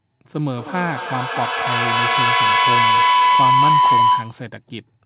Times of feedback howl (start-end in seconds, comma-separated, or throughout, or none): 0.49-4.48